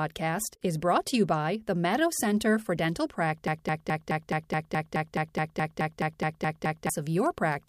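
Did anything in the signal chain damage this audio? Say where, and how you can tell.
Yes: playback likely stalled, causing a broken-record loop from 3.48 to 6.90 s. One 0.21 s fragment repeats 16 times back to back, and the speech it replaced is lost.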